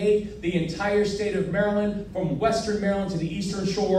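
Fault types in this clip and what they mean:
Nothing stood out on listening; the audio came across as expected throughout.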